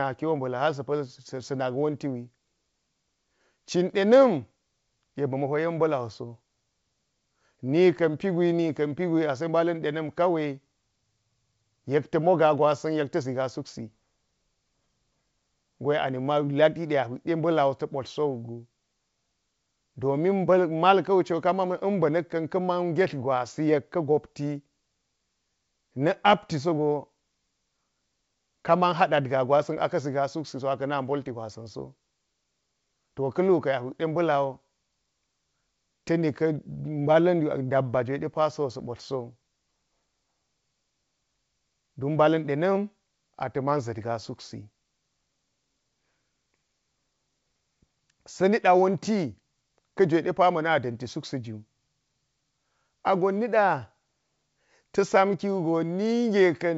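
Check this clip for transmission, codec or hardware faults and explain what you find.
Nothing here sounds amiss to me: the speech comes through as G.722 wideband telephone audio at 64 kbit/s, with at most a faint trace of the codec in the upper band, and there's nothing I'd flag.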